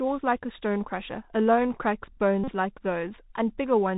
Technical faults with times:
0.00-3.97 Bluetooth CVSD headset codec
2.44-2.50 Bluetooth headset packet repeated

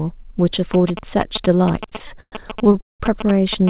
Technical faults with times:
0.74-3.70 GSM signalling bursts
1.86-3.02 repeated stalls (stutter)

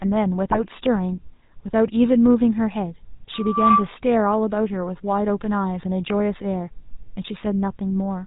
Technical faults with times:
0.00-8.26 GSM full-rate codec
0.51-0.58 GSM bit errors

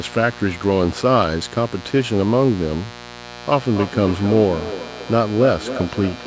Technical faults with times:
0.00-6.27 mains buzz
3.24-6.27 feedback echo between two devices

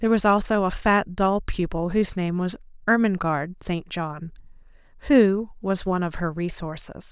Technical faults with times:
none

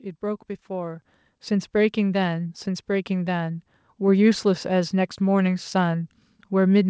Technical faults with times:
1.02 microphone volume stepped up

